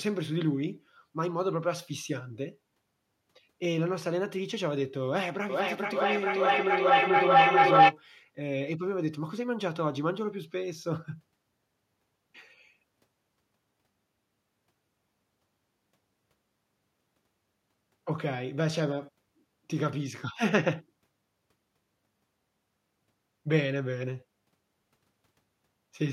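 From 5.49 to 7.98 s a feedback howl builds: the mic-to-loudspeaker loop gains level each trip, so repeats grow into a tone near 700 Hz, pulsing roughly every 400 ms and peaking about 10 dB above the speech. Unlike echo, it swells rather than fading.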